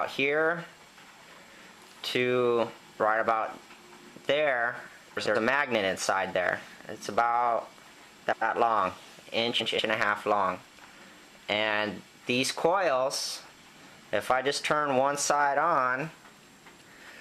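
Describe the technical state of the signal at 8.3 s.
Frames out of order, 8.23 to 8.42 s: two adjacent 93 ms blocks play swapped, giving a garbled flutter; the spectrogram shows abrupt discontinuities at the joins.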